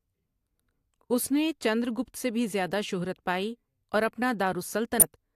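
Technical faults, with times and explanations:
4.99–5.03 s, damaged data in a compressed stream: corrupted bytes leave the decoder misreading frames and hunting for the next valid header, giving a brief glitch heard as a chirp, squawk, click or short hole. A spectrogram and the waveform show a short disruption at that point.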